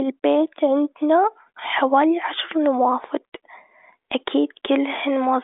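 No technical faults can be heard in the speech, which arrives over a telephone-band G.726 ADPCM path at 40 kbit/s, confined to roughly 300 Hz to 3.6 kHz with nothing above 3.8 kHz, and whatever coding roughness that leaves is faint at most.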